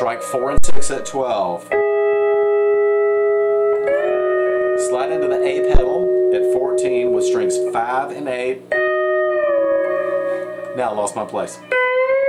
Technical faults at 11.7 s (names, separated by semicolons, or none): none